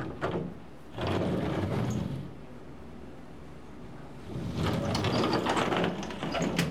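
Sound recording with no audible technical faults.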